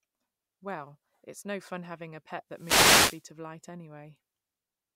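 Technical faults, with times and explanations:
2.51–3.29 s, wireless microphone noise hit: right after "fun having a pet" there's a burst of hissy static lasting about 0.78 s that runs until "of light". What's going on is the FM radio link dropping into a fade, where reflected copies of the signal cancel the direct one. The receiver's own noise swells up as the carrier weakens, and that's the swishy patch you hear.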